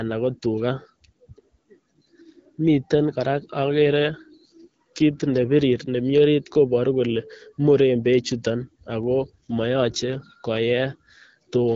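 From 3.71 to 5.62 s and again from 9.03 to 10.34 s the speech goes through an AMR rate drop. The coding rate falls back, which fits a step from 12.65 down to about 8.85 kbit/s in the AMR-WB codec, so the speech turns rougher and more synthetic before clearing. On a spectrogram the band edge holds steady and the waveform has no gap, but harmonics look smeared and grainier during both stretches.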